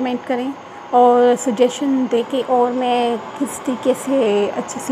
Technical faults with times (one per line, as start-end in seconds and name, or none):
2.20-4.26 drift correction step